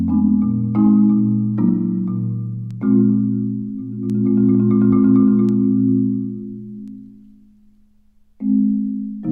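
Word clock ticks recur about every one and a half seconds from 1.31 to 8.26 s, around seven in all, where an unlocked receiving clock drifting roughly 15 ppm drops or repeats single samples, appearing as thin vertical lines on a spectrogram.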